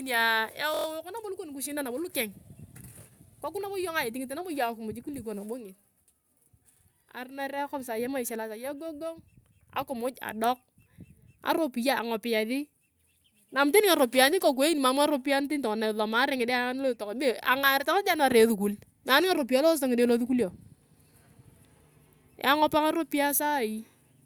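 At 0.74–0.86 s, a system hang loop: the driver stalled while the hardware replayed a 23.2 ms buffer five times, producing a brief 43.1 Hz buzz.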